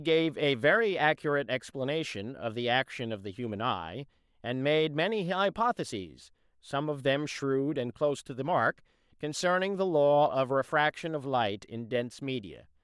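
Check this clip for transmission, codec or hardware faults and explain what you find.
No faults found anywhere in the speech.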